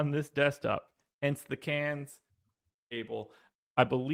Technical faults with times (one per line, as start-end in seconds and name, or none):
none